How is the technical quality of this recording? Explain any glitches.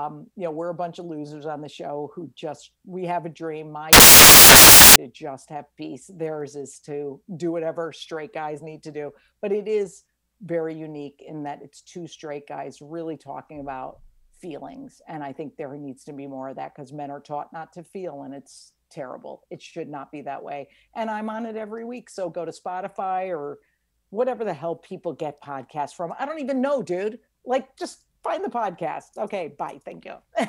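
There's one real glitch. From 3.93 to 4.96 s, about a second, the samples are built from the wrong bytes: the reader misassembles each sample, so the fast-flickering low bits end up dominating. You hear it as a burst of loud, harsh noise, close to white on the louder sounds.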